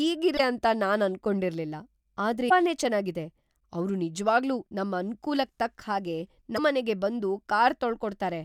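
Short glitches break into the speech at 0.35 to 0.40 s, at 2.46 to 2.51 s just before "ಚೆನಾಗಿದೆ ಅವ್ರು ನಿಜ್ವಾಗ್ಲೂ", and at 6.54 to 6.59 s. Each lasts about 50 ms. This is damaged data in a compressed stream: the decoder misreads corrupted frames and loses sync until it finds the next valid header.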